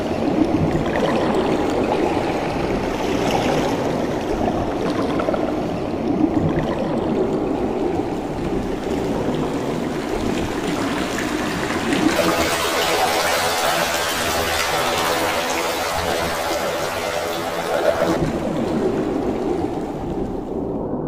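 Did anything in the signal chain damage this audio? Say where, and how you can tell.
Yes. From 12.16 to 18.16 s the sound turns to a flutter near 42 Hz, pitched an octave up. That points to planar audio read as interleaved at the sample-format conversion stage. Blocks of about 24 ms each play twice at double speed, left then right.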